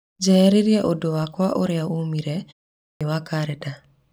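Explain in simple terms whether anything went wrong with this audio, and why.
Clipped start after a pause, at 2.83 to 3.01 s: after a 0.39 s silence, the playback device was still waking up, so about 0.18 s of speech was lost.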